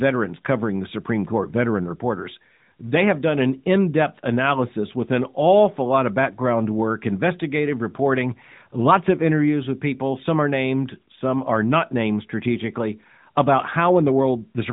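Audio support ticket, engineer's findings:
No faults found: the speech runs through the AMR narrowband mobile codec path, with nothing above 4 kHz and only light coding texture, which fits the 12.2 kbps mode.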